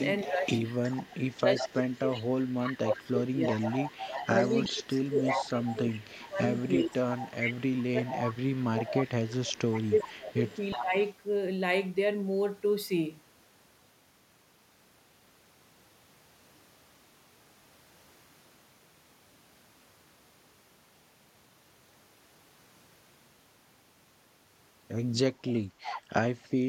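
A speech recording with two linked faults. The first is an echo leak. From 0.0 to 8.58 s, again from 9.33 to 10.81 s, and briefly from 25.51 to 26.02 s, a delayed copy of the talking trails the original by about 0.37 s. It sits roughly 10 dB below the direct speech. The likely cause is a far end on loudspeaker whose echo canceller let part of the microphone pickup return down the line. The second fault is speech suppressed in double talk. It happens while both sides are talking. Between 0.24 and 0.5 s the level sags by about 10 dB. From 1.12 to 3.44 s it drops much harder, by up to about 25 dB, for over a second in total. From 3.99 to 10.98 s it falls by up to about 20 dB, in pieces adding up to around five seconds. Here the canceller likely could not tell the talker apart from the returning echo, so it pulled both down.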